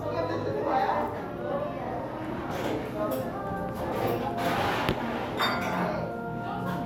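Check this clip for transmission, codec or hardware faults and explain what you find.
The clip has one fault type, compressed frames skipped, occurring four times: at 0.61 s, 2.41 s, 3.91 s, and from 5.37 to 5.41 s. Each time, a few whole 20 ms frames are dropped, so the sound jumps ahead by around 70 ms. The decoder either never received those frames or rejected them as damaged. Each join is heard as a sudden jump in the sound where the missing audio should have been.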